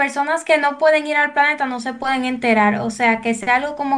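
Listening to the speech here, nothing stood out as a technical problem.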